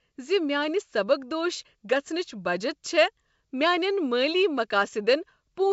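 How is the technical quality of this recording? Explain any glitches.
No glitches can be heard: the speech arrives through G.722 wideband telephone coding at 64 kbit/s, which carries the band up to 7 kHz, and at most a faint trace of the coding shows in the sound.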